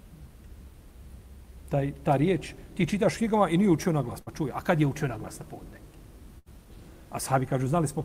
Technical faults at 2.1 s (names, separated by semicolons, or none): none